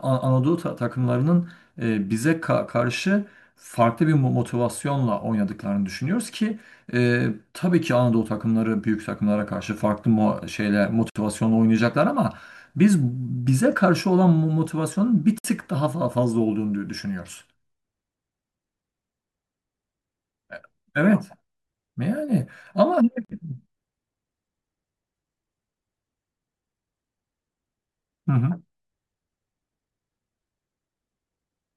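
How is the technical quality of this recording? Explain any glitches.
The recording has three brief dropouts, each a gap at a join of encoded pieces. Separately encoded sections were joined untrimmed, so encoder start-up delay and last-frame padding remain. The speech cuts to silence at 11.10 s (60 ms), 15.38 s (60 ms) and 23.25 s (46 ms), with smeared edges, then resumes where it stopped.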